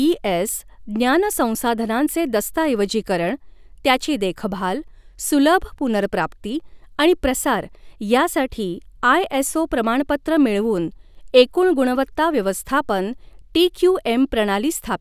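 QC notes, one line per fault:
No technical faults can be heard anywhere in the speech recording, and the signal stays steady and continuous throughout.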